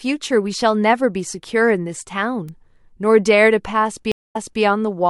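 At 2.49 s a single sample jumps to a wrong value and straight back, a bit error spike from one flipped bit. It gives one sharp, full-band tick unrelated to the speech, unlike a dropout or glitch, which would leave a gap or smear.

From 4.12 to 4.62 s comes a stream reconnect. The link broke and the audio went silent for 164 ms. A fresh decoder then resumed about 340 ms earlier, so that stretch repeats. This backward jump, rather than lost audio, distinguishes it from simple packet loss.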